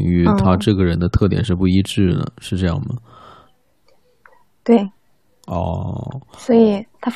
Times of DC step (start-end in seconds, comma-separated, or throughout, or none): none